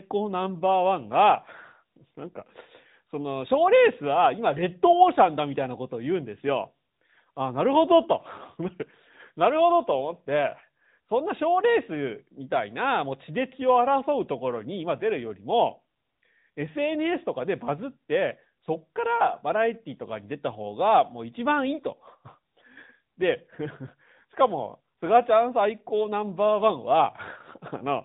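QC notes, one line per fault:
Throughout: AMR narrowband mobile codec. Nothing above 4 kHz survives, so the speech sounds thin and phone-like. Sibilants lose their edge. A plainly audible buzzy, synthetic tone comes from the pulse-driven vocal-tract model, and it points to a high-rate mode near 10.2 kbps.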